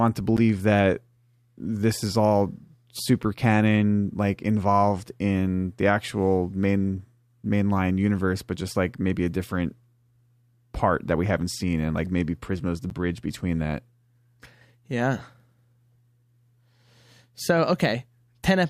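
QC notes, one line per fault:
0.37 s and 12.90 s, block of digital silence: each is a sharp tick in the speech, where about 11 ms of samples drop straight to silence and back with no fade. The block length fits a 512-sample output buffer that went unfilled in time.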